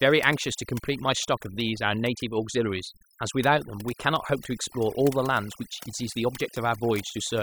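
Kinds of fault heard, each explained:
Overdone noise removal: noise reduction pushed too hard cuts bands near the noise estimate, leaving a lowered background with twinkling specks throughout.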